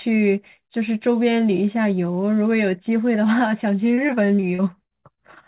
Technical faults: repeated packet loss (robotic sound)

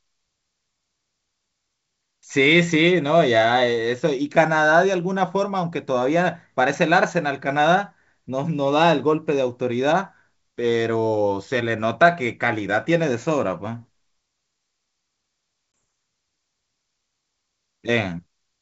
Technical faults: packet loss on an ADPCM call

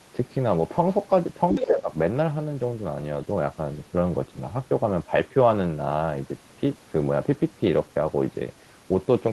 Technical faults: other side's voice leaking through; speech suppressed in double talk

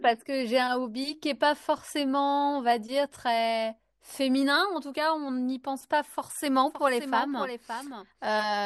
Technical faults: doubled audio track

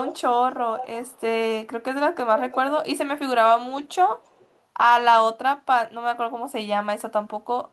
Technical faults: echo leak

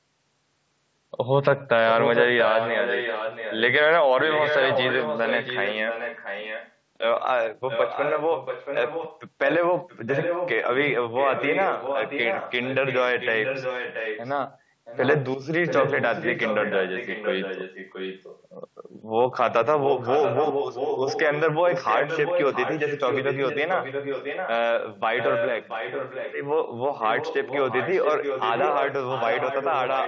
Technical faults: echo leak

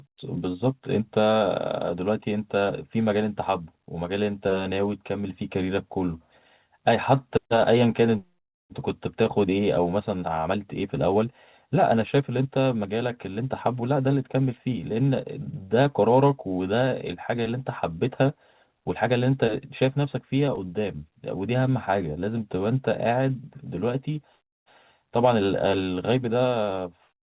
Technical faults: short concealed packet loss

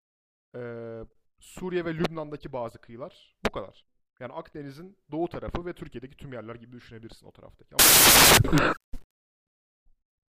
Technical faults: samples built from the wrong bytes

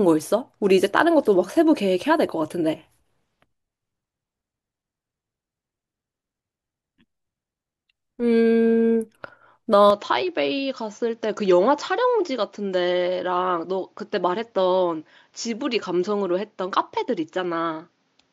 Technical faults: input switched to a poorer device

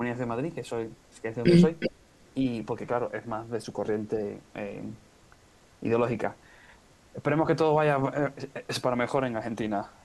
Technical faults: echo leak

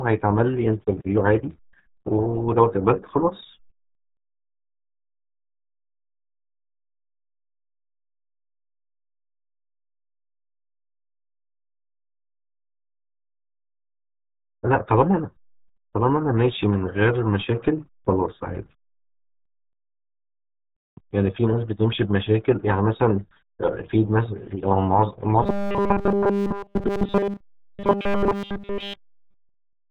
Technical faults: RealAudio 14.4 codec; robotic sound from repeated short buffers

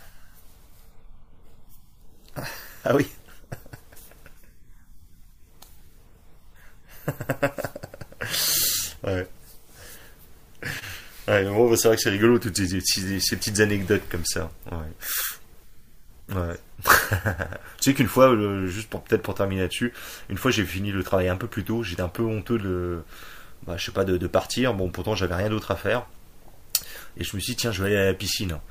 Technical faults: none

